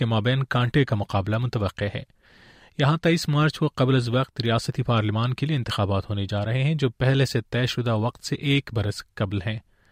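No technical faults can be heard anywhere in this speech recording. Nothing in the audio calls for comment at any point.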